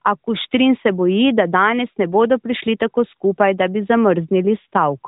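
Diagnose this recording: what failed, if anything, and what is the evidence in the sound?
Nothing failed: the speech passes through an AMR narrowband mobile codec path, band-limited at 4 kHz as that codec always is and consistent with its 12.2 kbps mode, and no stage from capture to playback shows a fault.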